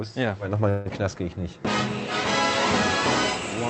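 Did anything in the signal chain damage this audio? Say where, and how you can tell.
Yes. There is a call audio freeze at the network and jitter-buffer stage, from 0.69 s to 0.87 s. The audio stalls and the last sound is stretched into a fading, buzzy hiss for about 160 ms. It never drops to silence. Afterwards the audio resumes exactly where it stopped, with nothing skipped, now running about 160 ms late. That pattern of concealment followed by an intact resume is the signature of packets likely arriving late and draining the jitter buffer.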